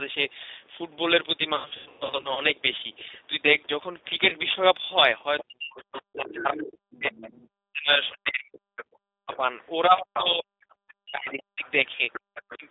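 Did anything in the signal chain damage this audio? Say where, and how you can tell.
Yes. At the codec stage, the whole clip has been through G.729, the 8 kbit/s CELP speech codec, and the damage is plainly audible. The speech is confined to roughly 300 Hz to 3.7 kHz, so it sounds boxed-in and telephone-like. It also has the slightly rough, synthetic texture of a voice rebuilt from a short-term filter, a pitch predictor and a handful of pulses per subframe rather than from the original waveform.

On the network side, there is VoIP packet loss concealed by the speech codec. The first burst runs from 1.56 to 2.42 s: about 480 ms of audio is missing, scattered across roughly 810 ms, with the longest gap 120 ms. There the sound smears into a buzzy tone or coloured noise that fades as the decoder repeats its last pitch and filter at falling gain, and it stays weak briefly afterwards while the decoder state recovers. 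A single 30 ms dropout at 4.29 to 4.36 s gives a short blurred catch.

In the call processing, the other side's voice is leaking through, likely residual echo that the echo canceller failed to remove from a loudspeaker-to-microphone path. A second voice appears underneath at 5.39 to 7.33 s, 8.77 to 9.37 s, 9.98 to 10.24 s and 10.92 to 12.66 s. It sits around 15 dB below the main speech in the first two stretches, only about 5 dB below in the third, and around 20 dB down in the last.

Also in the call processing, the talker's speech is suppressed in double talk, likely with the echo control ducking the near end while the far end is active. From 5.44 to 11.66 s, about five seconds in total, the main speech dips and cuts out in pieces, at its deepest by something like 40 dB. The same kind of drop recurs briefly at 12.26 to 12.64 s. The timing overlapping the leaked voice is what gives it away.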